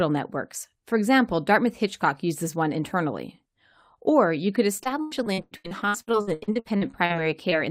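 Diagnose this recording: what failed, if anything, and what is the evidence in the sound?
From 4.77 to 7.12 s, just after "you could", the speech turns choppy and robotic, with pieces dropping out in quick succession. This is repeated packet loss at the network stage. Audio kept arriving late or not at all, and the receiver bridged each hole by extending the last sound. Close to 0.9 s of speech is missing across the stretch, the longest hole is about 0.1 s, and roughly 38% of the span is filled in rather than real.

At 7.50 to 7.53 s there is a brief smear, a small wobble. It is a short concealed packet loss, also on the network path. About 20 ms of audio failed to reach the decoder in time. The receiver carried the preceding sound forward across the gap and then blended back into the real signal. Because the hole is so short, it registers as a momentary blur rather than a dropout.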